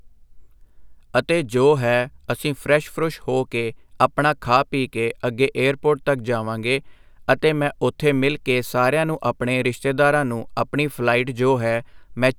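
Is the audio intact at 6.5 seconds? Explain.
Yes, at 6.5 seconds the speech plays through intact, with no dropout, click, distortion or other fault audible at that moment.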